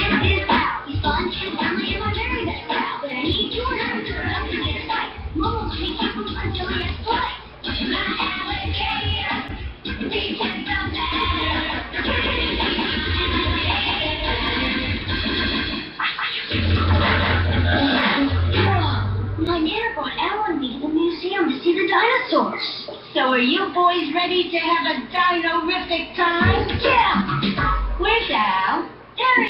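From 11.12 to 18.00 s a doubled audio track appears: a full-band copy trails about a fifth of a second behind at roughly equal level, starting and stopping abruptly, likely from a second, slower capture path.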